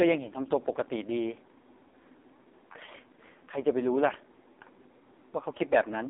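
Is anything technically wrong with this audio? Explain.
Yes. AMR narrowband mobile codec, throughout: the speech is squeezed into a 250 Hz to 3.7 kHz phone band and rebuilt from a vocal-tract model fed by sparse pulses. The heavy buzzy, synthetic texture points to a very low bitrate, around 5 kbps.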